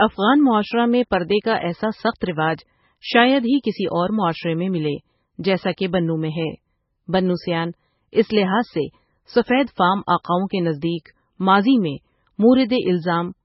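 Heavy lossy coding runs through the whole clip, most likely MP3 compression at a very low bitrate, which fits roughly 16 kbps. Starved of bits, the encoder discards everything above about 5.6 kHz and drops the weaker frequency lines, which then flicker in and out between frames. The speech therefore sounds dull and muffled, with a watery, swirling texture, metallic chirps on s sounds, and consonant onsets that smear rather than strike cleanly.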